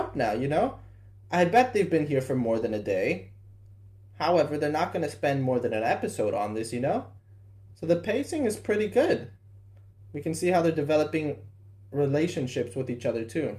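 A faint, steady rattle runs through the audio from 0.11 s to 13.59 s: tiny ticks about every 20 ms, clearest on loud sustained passages. These are clock slip clicks, likely from two unsynchronised device clocks drifting roughly 1000 ppm apart, each slip dropping or repeating a single sample.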